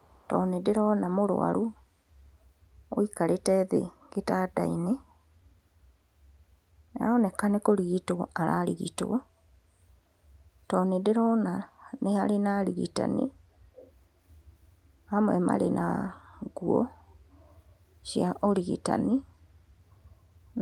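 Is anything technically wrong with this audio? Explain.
Yes. There are two kinds of fault, both tied to a far end that plays the call over a loudspeaker.

Echo leak: at 0.00 to 0.28 s a faint, delayed copy of the speech trails the original by about 427 ms. It sits far below the main signal, roughly 35 dB down. At 13.76 to 13.91 s a brief, clearer copy appears, delayed by about 487 ms and noticeably stronger, though still well under the speech. The likely cause is an echo canceller that failed to fully remove what its microphone picked up from the loudspeaker, so that residue was sent back down the line.

Background gated by the echo canceller: from 13.33 to 13.75 s the canceller clamped down on the microphone while the loudspeaker was active. For a little under half a second the room sound sinks by up to about 8 dB, so the ambience thins and then returns once the suppression releases. The short echo scrap follows immediately, at 13.76 s.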